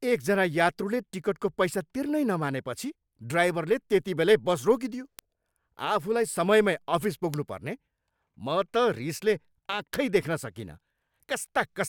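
A speech clip with three bit error spikes: sharp ticks at 5.19 s, 7.34 s and 9.94 s, peaking around -11, -11 and -5 dBFS. A flipped bit throws one or two samples off by a power of two, leaving a lone waveform needle and a thin full-height spectrogram line.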